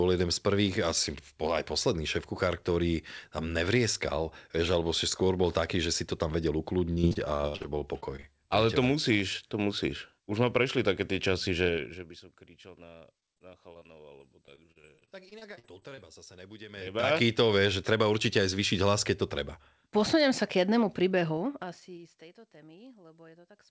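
From 6.86 to 8.25 s, and again from 13.20 to 15.99 s, the speech breaks up with repeated packet loss, heard as a robotic sound. Holes come in quick succession, about 15 in the first stretch (longest 71 ms) and 21 in the second (longest 42 ms). Each is patched by stretching the last sound, so the speech turns choppy rather than dropping to clean silence as a plain dropout would. The first stretch has more of its length patched, with nearly a third of it filled in.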